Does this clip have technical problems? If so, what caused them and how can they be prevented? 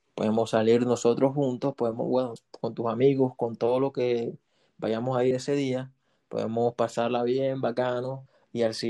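Yes. The speech skips abruptly at 2.36 s and 5.31 s, each time losing roughly 50 ms, with the two sides butted together. This is audio missing between chunks, likely from a recorder handing off 3-second blocks and dropping a piece at each changeover. Double-buffering the recording so the next chunk opens before the last one closes prevents it.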